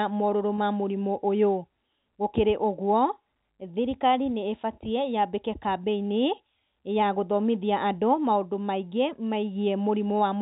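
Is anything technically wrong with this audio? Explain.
Yes. At 0.57 s, a brief packet loss with pitch repetition: roughly 20 ms of speech, which fits one lost packet, was filled by repeating the last pitch period. It sounds like a short buzzy hold rather than a silent gap or click. The G.711 telephone band limit is audible throughout.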